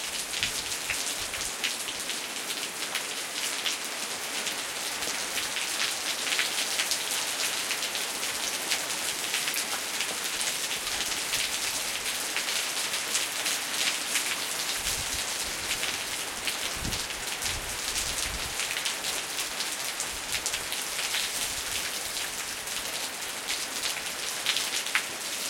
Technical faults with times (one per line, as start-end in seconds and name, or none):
none